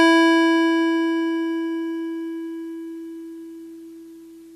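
A short music clip, and nothing technically wrong turns up anywhere in it.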